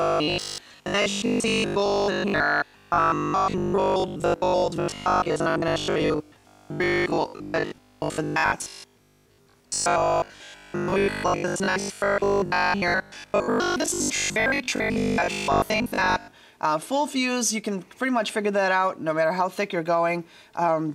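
Robotic sound from repeated short buffers runs from 0.02 s to 16.34 s, a rigid metallic buzz pitched at 50 Hz that still loosely tracks the underlying sound. The likely cause is new audio arriving too seldom, so playback fills the gaps by looping the most recent fragment while fresh material is skipped. A 50 Hz buzz fits a repeated slice of about 20 ms, and much of the signal seems to be replaced by these repeats.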